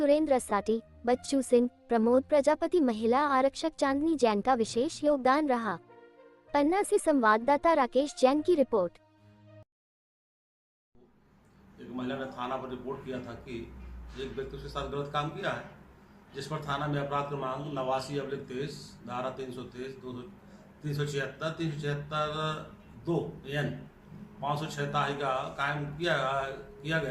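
No technical faults are audible anywhere in the recording.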